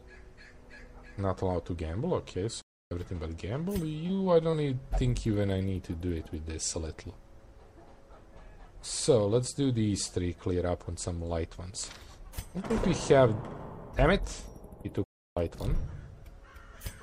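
The audio cuts out abruptly twice, going silent from 2.62 to 2.91 s (about 0.29 s) and again from 15.04 to 15.37 s (about 0.32 s) before carrying on. These are playback stalls, most likely the player running short of data or having its output thread blocked until it caught up. Between 3.63 and 4.55 s the sound turns choppy, with seven short holes, the longest about 21 ms, patched by stretching the preceding sound over roughly a tenth of that span. This is repeated packet loss, with packets dropped or arriving late one after another and concealment filling each gap.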